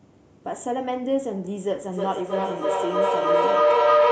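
From 1.92 s to the end, a howl near 500 Hz builds over the speech, pulsing roughly every 300 ms and peaking about 9 dB above it. This is feedback howl: two devices in one room on the same call, each loop trip adding level until it rings.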